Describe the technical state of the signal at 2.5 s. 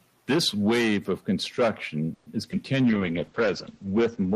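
Around 2.5 s you've got short concealed packet loss, twice in quick succession: 2.42 to 2.45 s and 2.51 to 2.54 s. Bits of the call arrived too late, so the receiver bridged each hole by carrying the last sound forward before blending back. The second gap also has the playback skipping ahead by a few tens of milliseconds. You hear a quick smear or wobble each time.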